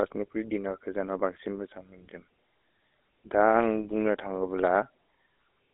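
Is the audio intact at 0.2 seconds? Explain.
No. At 0.2 s, as throughout the clip, the speech sounds buzzy and gravelly, thin and band-limited to about 300 Hz to 3.7 kHz with nothing above 3.8 kHz. This is GSM full-rate codec damage, which fits a 13 kbps stream.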